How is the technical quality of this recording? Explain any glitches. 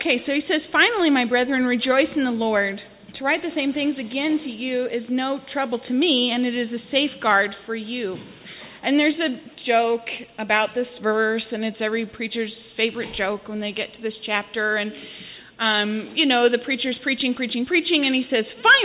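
No technical faults or glitches can be heard here.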